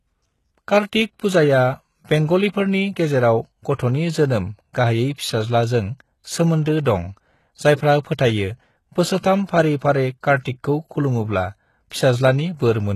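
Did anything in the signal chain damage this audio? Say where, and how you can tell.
Yes. At the codec stage, the whole clip has gritty, lispy treble with nothing above 12.3 kHz, likely HE-AAC compression at a low bitrate near 16 kbps. The treble is rebuilt rather than simply dulled.

Pre-echo sits at 9.20 to 9.23 s: a 36 ms hiss precedes an attack and softens it. The codec block's noise smears ahead of the onset, unlike a click or dropout.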